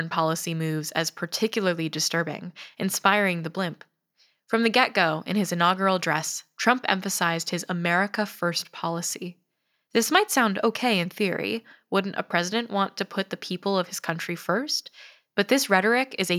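No technical faults can be heard anywhere in the recording. There is nothing here to place on a timeline.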